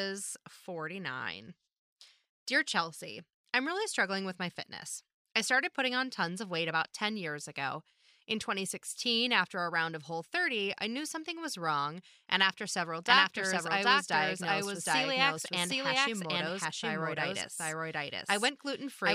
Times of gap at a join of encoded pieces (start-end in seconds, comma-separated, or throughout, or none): none